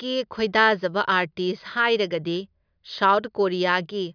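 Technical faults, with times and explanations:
No technical faults can be heard in the speech recording. Nothing in the audio calls for a time or an explanation.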